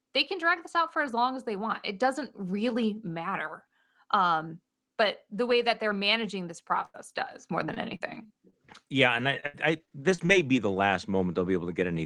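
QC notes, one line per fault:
6.85–10.58 s repeated packet loss (robotic sound) after "that they're managing this": choppy sound with gaps up to 86 ms, each lost packet patched by extending the previous audio.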